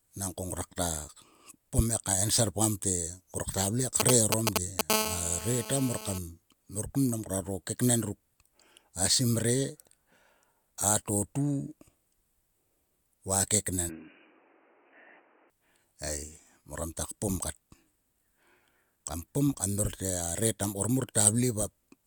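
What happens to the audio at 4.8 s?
GSM signalling bursts run from 4.00 to 4.81 s, just after "ktua vle": a nearby 2G phone's intermittent 216.7 Hz radio bursts, rectified by the audio circuit, give galloping ticks and short buzzes louder than the speech. At 4.90 s a steady GSM phone buzz follows, which fits the phone entering a call. It is a raspy, harmonic-rich 216.7 Hz buzz about 5 dB below the speech that lasts until 6.18 s, ending before "mor kun mang nguaro".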